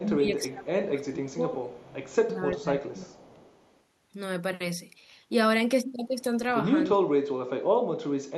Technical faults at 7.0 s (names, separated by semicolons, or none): speech suppressed in double talk